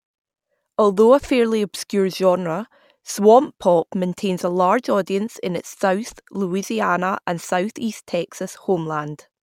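Nothing goes wrong at any point in this speech recording, so there's no technical fault to flag anywhere along the way.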